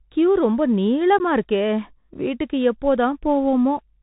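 Bluetooth CVSD headset codec throughout: the speech passes through a narrowband one-bit delta link, consistent with 64 kbps, leaving nothing above 4 kHz, scratchy sibilants and a granular hiss.

Unconcealed Bluetooth headset packet loss at 1.19 to 1.21 s: a couple of packets dropped, leaving a 15 ms hole with abrupt edges and a briefly quieter return.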